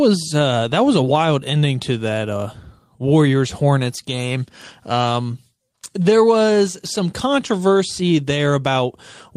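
No technical faults can be heard anywhere in this recording of speech. The audio runs without any break, glitch or disturbance from beginning to end.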